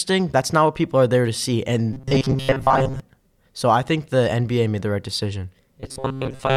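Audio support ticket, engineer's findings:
Robotic sound from repeated short buffers, 1.93–3.00 s, after "are there to see". Speech becomes rigid metallic buzz at 133 Hz, loosely following the words. Likely audio arriving too seldom: last ~7.5 ms block replayed, most real audio skipped.

Same fault, 5.80 s to clip end, after "made the right decision". Identical 133 Hz buzz. The pitch is one over the repeated block length, so the same short buffer is likely being recycled.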